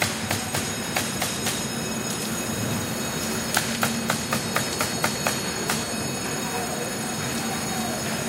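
Feedback whistle from 2.74 s to the end: a thin 4.4 kHz tone that slowly swells and fades, about 15 dB below the sound, likely a loudspeaker-to-microphone loop held just short of runaway.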